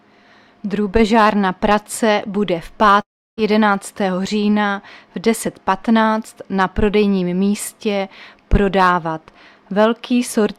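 From 3.01 to 3.39 s the audio decays into a fading buzz, then silence, resuming with 0.36 s lost, likely a long network dropout.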